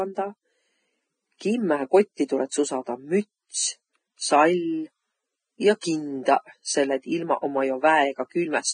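Across the whole speech clip there is heavy Vorbis compression damage. Nothing is present above 9.6 kHz, and the treble that remains is grainy and hissy rather than detailed, with consonant attacks blurred. This is likely low-quality Vorbis encoding at a bitrate in the region of 20 kbps. At that setting the encoder lowers its cut-off and quantises the upper residue so coarsely that fine structure is replaced by noise of similar energy.

A pre-echo occurs from 1.38 to 1.41 s, where a short hiss about 26 ms long runs ahead of a sharp onset, softening the attack. A second, shorter pre-echo appears at 5.81 s. In both places the quantisation noise sized for a loud transient has been spread across its whole transform block, so it also fills the quiet interval just before the attack.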